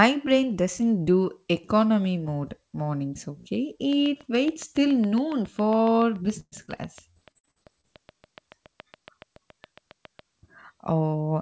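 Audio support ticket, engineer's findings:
Train of clicks, 3.93–10.20 s, starting after "economy mode mornings okay": regular ticking at 7.15 per second, roughly fifty clicks, peaking a few dB above the signal and audible in pauses too. Likely interference or interface fault. Near-identical pulse shape and steady rate distinguish it from codec dropouts.

Repeated packet loss (robotic sound), 6.40–7.85 s: around ten holes, longest 118 ms, about a quarter of the stretch patched by continuing the last sound. Choppy speech, unlike the clicks' isolated ticks. Happens inside the click stretch.

Band-limited to 8 kHz, consistent with a G.722 call path at 64 kbps.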